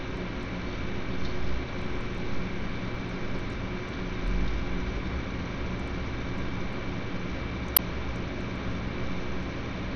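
From start to finish the audio carries Bluetooth SBC compression damage, likely from a low bit pool on the link. The treble is cut hard: nothing sits above 12.9 kHz, and the highest remaining band flickers in and out, with a gritty noise and aliasing layered on the sound. The damage is plainly audible and points to a bitrate of roughly 80 kbps. On a spectrogram this shows as a flat ceiling at 12.9 kHz with blotchy, intermittent energy just below it.

From 7.77 to 7.79 s, an uninitialised buffer produces a sharp, loud burst of harsh digital noise lasting about 21 ms. Instead of audio, playback read a block of stale memory as samples, and the length fits a 1024-sample block. On the waveform it is a dense slab of noise-like values that starts and stops abruptly. On the spectrogram it is a bright vertical bar spanning the whole band.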